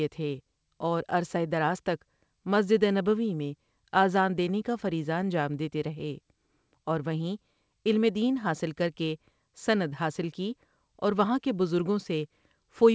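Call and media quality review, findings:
No faults found in the speech; the G.722 call path at 64 kbps shows only its expected band limit, with nothing present above 8 kHz.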